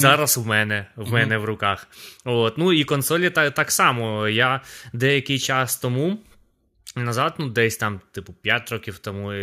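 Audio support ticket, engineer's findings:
Listened through the speech recording and found nothing to flag, so there's no symptom, timestamp or component to log on this ticket.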